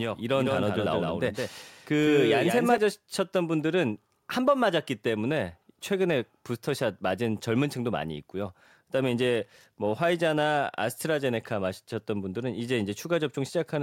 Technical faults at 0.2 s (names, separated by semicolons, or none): doubled audio track